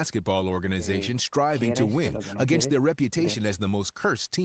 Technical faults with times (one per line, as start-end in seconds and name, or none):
none